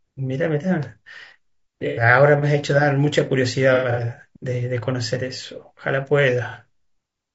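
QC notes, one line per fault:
Throughout: low-delay AAC compression. The speech sounds rough and grainy throughout, with a noise haze filling the gaps between harmonics and a thin, synthetic-sounding top band. The likely cause is AAC-ELD at a low rate, around 32 kbps. Its short frames resolve pitch harmonics poorly. A spectrogram would show smeared, blurred harmonic lines, noise between them, and a patchy, band-limited upper region.
1.88–2.02 s, 3.74–4.01 s, 6.50–6.55 s: AAC frame loss with concealment. The decoder patched over missing frames using the last good spectrum, so each gap sounds like a smeared, noisy, phasey blur instead of a dropout. The losses total about 90 ms at 1.88 s, 150 ms scattered over 240 ms at 3.74 s (the longest run is roughly 100 ms), and 30 ms at 6.50 s. On a spectrogram these show as blocky frozen or noisy patches where the harmonic detail vanishes.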